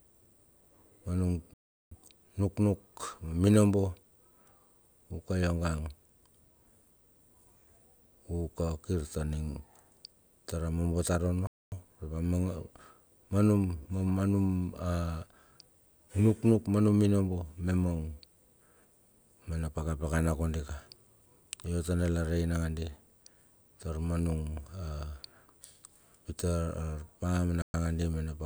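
A likely Bluetooth stall, with the headphone buffer running dry as packets were delayed, cuts the speech to silence at 1.54–1.91 s, 11.47–11.72 s and 27.62–27.74 s before it resumes.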